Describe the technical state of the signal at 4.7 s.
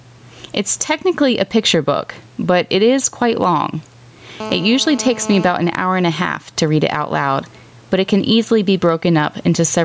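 At 4.7 s you're in the middle of a GSM phone buzz that runs from about 4.40 to 5.52 s, kicking in right after "it is quite long". A 2G phone in a call close by is firing its transmitter in bursts at about 217 Hz, and the audio circuitry is rectifying those radio pulses. You get a hard, raspy buzz at 217 Hz with a stack of harmonics, steady across the span, sitting about 17 dB under the speech and unrelated to it.

The gain pumping also affects that moment, as it does the whole clip. The gain swings by roughly 10 dB. The likely cause is mic gain set way too high and a fast limiter or compressor clamping down on every peak, so loud and quiet parts get squeezed together and the sound comes across as squashed.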